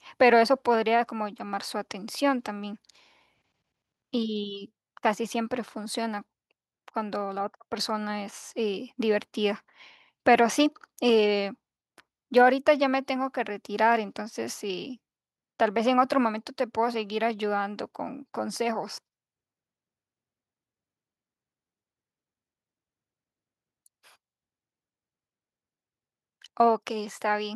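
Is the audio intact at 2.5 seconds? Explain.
Yes, the audio is intact at 2.5 seconds, with no fault audible at that moment.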